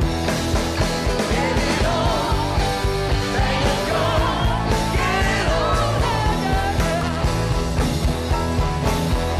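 At 7.01 s, damaged data in a compressed stream: corrupted bytes derail the decoder, which loses frame sync and resynchronises, leaving a brief chirp, squawk, click or short gap.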